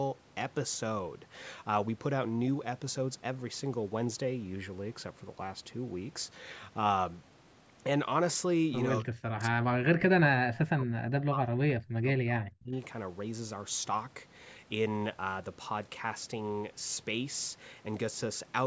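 Speech suppressed in double talk, likely from an echo canceller mistaking overlapping talk for echo: a brief dip from 9.01 to 9.09 s, then suppression reaching roughly 35 dB from 9.32 to 12.73 s.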